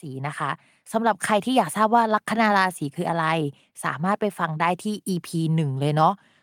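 Automatic gain rising from 0.05 s to 1.77 s: the level control judged the incoming speech too quiet and pushed its gain upward gradually, by about 5 dB over roughly 1.7 seconds. Because the gain acts on everything the microphone picks up, the voice and the background noise swell together rather than the speech alone getting louder, giving the opening a slow fade-in character before the level settles.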